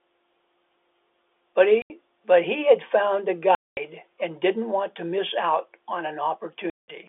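At 1.82 to 1.90 s, 3.55 to 3.77 s and 6.70 to 6.88 s the speech drops out to dead silence for 80, 220 and 180 ms. This is packet loss filled with silence: the receiver had nothing to play for those stretches and inserted zeros. Each gap is a multiple of 10 ms, which fits 10 ms packets. The abrupt cut and restart are heard through the narrow telephone band of the G.711 line.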